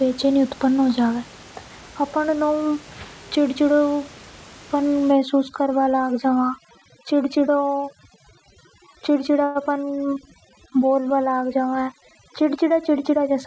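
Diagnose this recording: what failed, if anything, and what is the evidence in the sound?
Overdone noise removal, from 5.12 s to the end, is a call-processing fault. From that point the room noise, which sat about 22 dB below the speech, drops and breaks up into twinkling specks. The suppressor is set far too hard: it drives individual frequency bands down or off whenever they approach its noise estimate, so the quieter parts of the speech are removed along with the background.

A call audio freeze at 9.44 s, lasting about 0.13 s, sits at the network and jitter-buffer stage. The receiver stretches the last sound into a brief fading continuation for 112 ms instead of going silent, and then the speech picks up exactly where it left off. Nothing is lost, but everything after that point runs about 112 ms later. The likely cause is delayed packets emptying the jitter buffer until they arrived.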